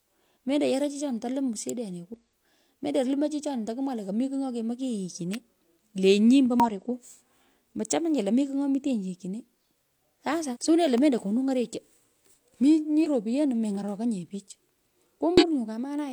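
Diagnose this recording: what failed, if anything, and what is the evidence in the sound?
Sharp snaps cut into the speech at 1.69 s, just after "yoroi chichoni to lium", then at 5.34 s and 10.98 s. Each lasts between 1 and 13 milliseconds and sits on top of the signal. This points to the analogue wiring. The likely cause is an electrical switching spike, where a nearby switch or motor arcs and the line picks it up.

Damaged data in a compressed stream shows up as short disruptions at 2.14 s and 6.60 s. Longer ones follow at 10.50 to 10.57 s, 13.01 to 13.07 s and 15.38 to 15.44 s. This is a codec-stage fault. Corrupted frames make the decoder lose sync and skip ahead to the next header.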